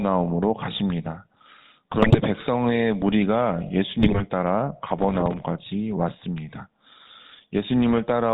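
The speech is carried through the GSM full-rate codec for its whole length. The codec's pulse-driven vocal-tract model, at a rate consistent with 13 kbps, cuts everything above 4 kHz and leaves a plainly audible buzzy, gravelly roughness on the voice.

GSM bit errors hit from 1.98 to 2.20 s and again from 4.00 to 4.22 s. Corrupted filter, pitch and gain parameters reach the decoder, so frames come out with warped spectra and level jumps, heard as brief squawks, pops and gargling.

From 4.99 to 5.39 s, processor overload crackle rides on the audio. The gap structure suggests buffers of around 5 ms, with some thirty deadlines missed. Each miss replays a scrap of old audio with hard edges, and together they make a gritty tearing that stops once the load clears.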